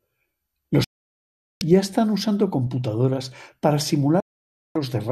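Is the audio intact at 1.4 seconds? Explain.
No. A digital broadcast dropout mutes the speech from 0.84 to 1.62 s. The receiver lost valid frames and fell silent, then resumed at "ya están usando computadoras" with nothing in between.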